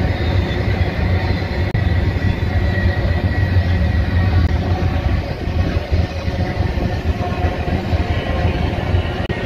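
At 1.71 to 1.76 s, 4.46 to 4.50 s and 9.26 to 9.30 s you get short blips of damaged data in the compressed stream, each roughly 40 ms long. The decoder hits corrupted bytes, misreads those frames and has to resync, so each one comes out as a brief chirp, squawk, click or short hole.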